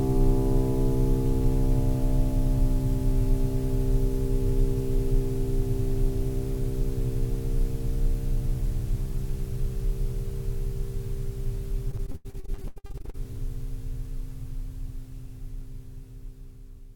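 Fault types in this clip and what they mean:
Repeated packet loss (robotic sound): from 11.91 to 13.16 s the music breaks into a rapid string of short holes, roughly twenty of them, the longest about 89 ms. Each one is papered over by stretching the sound just before it, so nearly half of that stretch is patched rather than real, giving a choppy texture with pieces missing. Unlike a single dropout, the holes keep returning in quick succession, so the whole passage sounds choppy throughout instead of briefly interrupted.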